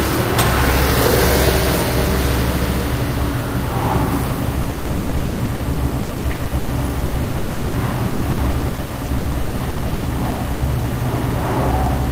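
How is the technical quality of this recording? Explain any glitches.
The recording is marred by one sustained problem: repeated packet loss, producing a robotic sound from 4.63 s to 10.62 s. Over those six seconds the stream drops out around fifty times, with the longest hole lasting 140 ms. Each gap is bridged by extending the last received sound, about 2.4 s of patched audio in total, roughly 40% of the stretch. That gives a choppy, robotic stutter. A waveform shows repeating, copied-looking segments; a spectrogram shows smeared, frozen bands between abrupt breaks.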